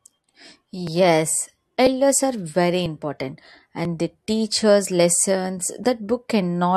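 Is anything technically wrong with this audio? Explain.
Yes. Overlap between stream segments occurs at 0.87, 1.87, 2.86 (after "are very"), 3.85 (before "they teach"), 4.85 (after "they teach") and 5.84 s. Overlapping timestamps on the 1-second segments make the player trim 9 to 17 ms of real speech at each boundary, so the waveform jumps and a small click or skip recurs about once per second.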